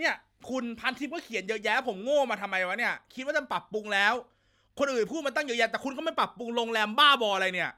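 No technical faults can be heard anywhere in the speech recording.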